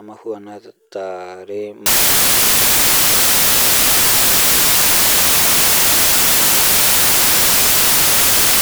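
From 1.86 s to the end, samples built from the wrong bytes turn the speech into loud, harsh broadband noise. Misassembled bytes push the fast-changing low bits into the large part of each sample.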